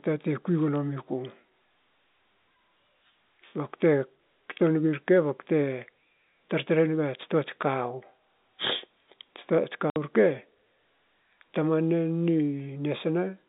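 At 9.90 s the speech drops into a hard 60 ms hole of dead silence, ending at 9.96 s, with hard edges where the waveform is cut off and restarts abruptly. This is packet loss filled with silence: the audio stream went missing and the receiver played nothing in its place. The gap length fits two consecutive packets of 30 ms each. The surrounding sound carries the narrow telephone band of G.711 coding, roughly 200 Hz to 3.7 kHz.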